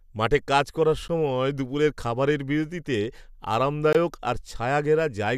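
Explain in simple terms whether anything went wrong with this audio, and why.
Twice the speech briefly drops into silence: a 12 ms hole at 1.08 s and a 20 ms one from 3.93 to 3.95 s. These are gaps at a join of encoded pieces, where separately encoded chunks were glued together with their padding left in. Unlike a dropout, nothing goes missing, and the speech resumes exactly where it stopped.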